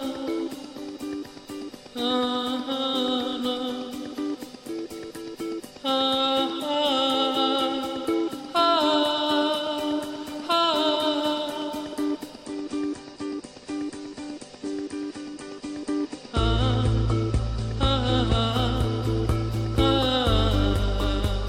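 From 12.45 s to 18.45 s the connection slowed and the adaptive stream switched to a lower bitrate, which fits a move from about 96 kbit/s AAC to about 32 kbit/s AAC. With fewer bits to spend, the encoder discards the top of the spectrum: nothing above 9.8 kHz remains, so the treble drops away and codec artefacts rise. The quality changes suddenly at both ends of the stretch, with no gap in the audio.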